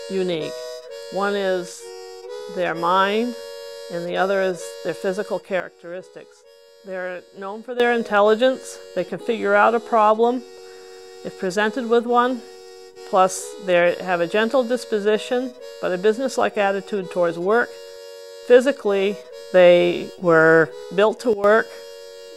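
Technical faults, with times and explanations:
5.6 to 7.8 s, sudden gain jump: the level drops by about 11 dB from one sample to the next and stays down for roughly 2.2 s before snapping back, with the background noise falling and rising in step. This is likely a digital gain change applied without a ramp.
21.33 to 21.44 s, sudden gain jump: a brief step down of about 12 dB lasting about 0.1 s, likely the same abrupt, unramped change, heard as a short dip in sound and noise together.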